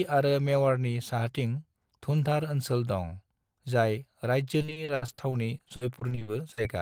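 From 4.61 to 6.59 s the speech breaks into repeated packet loss, with 19 short holes of up to 70 ms, each patched by stretching the last sound, so it turns choppy and robotic.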